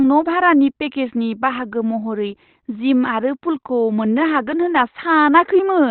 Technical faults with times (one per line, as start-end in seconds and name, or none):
0.00-5.90 Opus compression